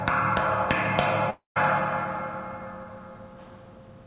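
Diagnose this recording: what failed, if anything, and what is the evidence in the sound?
Long network dropout, 1.3 to 1.58 s, network stage. At 1.3 s the last sound is stretched into a buzzy continuation that fades out, leaving about 150 ms of silence before the audio resumes at 1.58 s. The receiver's concealment filled the gap with a decaying copy of the most recent audio, and roughly 260 ms of the original never returned. This points to a likely burst of lost packets on the call path, whose band limit at 4 kHz fits G.711.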